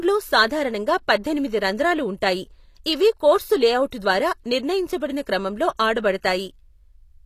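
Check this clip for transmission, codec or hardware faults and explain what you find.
One codec fault runs through the whole speech clip. HE-AAC compression, throughout: the damage is plainly audible and nothing is present above 14.9 kHz. The likely cause is HE-AAC at a low rate, which fits a stream of about 24 kbps. The codec encodes only the lower spectrum and synthesises the treble by copying lower bands upward under a coarse envelope. The top end stays bright but its harmonics don't align with the real ones, so sibilants come out gritty and metallic.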